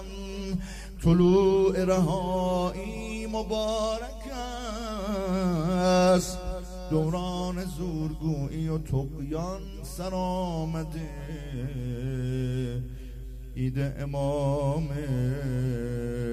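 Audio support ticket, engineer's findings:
Listened through the whole ticket clip and nothing stood out, so there's no fault to log here.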